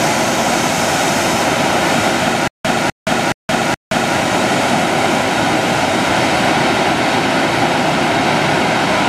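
From 2.48 s to 4.17 s the sound falls into a stutter with silent gaps: a fragment of about 252 ms plays, drops into roughly 170 ms of dead digital silence, then returns, four times at a steady 422 ms cycle. The likely cause is a stalled player or stream replaying its last buffered piece on each retry before running empty. Unlike a simple dropout, the same burst comes back identically, and the material meant for that stretch never plays.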